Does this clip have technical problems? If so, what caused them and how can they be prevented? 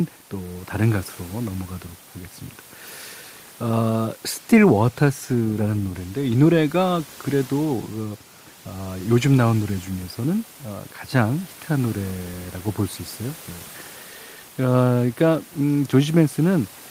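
No, there's nothing technically wrong here, just a bit of room noise sitting about 27 dB below the speech, which is part of the recording space rather than anything the system did.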